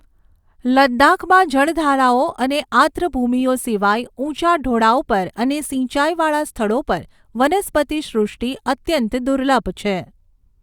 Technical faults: none

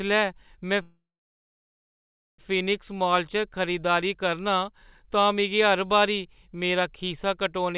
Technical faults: call audio freeze

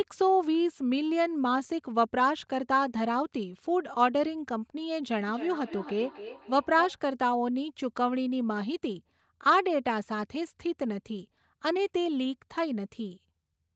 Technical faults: feedback echo between two devices

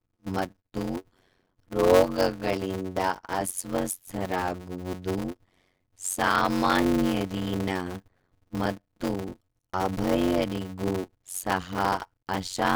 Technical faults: block size mismatch (padded)

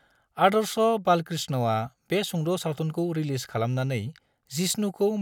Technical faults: none

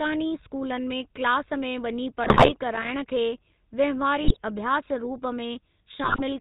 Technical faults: GSM full-rate codec; GSM bit errors

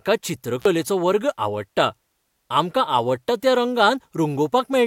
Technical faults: intermittent contact

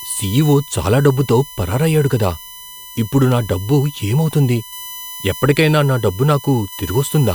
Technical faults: USB whine

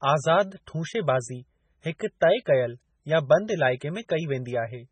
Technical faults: MP3 compression

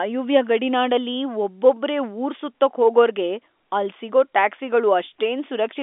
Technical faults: none

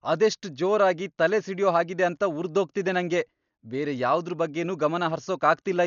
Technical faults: Dolby Digital compression

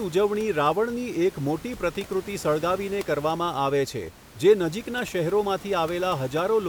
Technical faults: none

